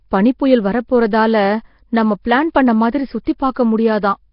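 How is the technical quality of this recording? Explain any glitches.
Quality is poor. Across the whole recording the speech carries a rough, hissy halo and a murky, underwater smear, and nothing is heard above about 5.3 kHz. This is heavy damage, likely from Nellymoser compression, with the sound pointing to a low bitrate of roughly 22 kbps. That codec spends very few bits on each short block, so weak bands get no real coding and are filled in with noise. The result is the grainy fizz and blurred texture heard throughout.

Two brief pre-echoes also appear. The first runs from 3.24 to 3.27 s, a smear of about 26 ms, and the second comes at 3.38 s, lasting about 15 ms. Each time, a short hiss arrives just before a sharp onset, and the onset itself sounds softened. The codec sizes its noise for the loudest moment in a block and spreads that noise across the whole block, so it leaks into the quiet instant ahead of the attack.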